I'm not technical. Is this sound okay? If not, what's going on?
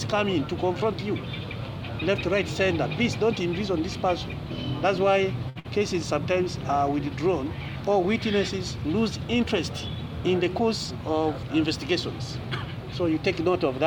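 No. Two brief network hiccups come one right after the other, just past 5.5 seconds.

From 5.49 to 5.58 s there is a short stall from a late packet. A piece of audio arrived late, so the player held the last sound for about 61 ms until it showed up. You hear a sound drawn out slightly, with a faint buzz or dip, but nothing is actually lost and the audio carries on from where it paused.

Straight after, from 5.60 to 5.66 s, comes a burst of packet loss. This time the audio never arrived in time. The player stretched the last sound into a fading hold for about 48 ms, and then the sound jumps ahead. Roughly 60 ms is skipped, which is what separates it from the stall: here something is genuinely missing.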